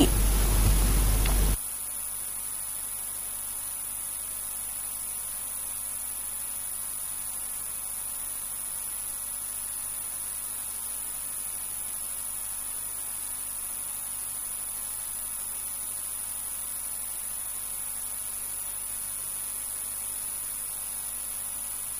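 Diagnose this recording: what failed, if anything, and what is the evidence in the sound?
Nothing failed: no stage of the recording chain leaves any evidence of a fault in the sound.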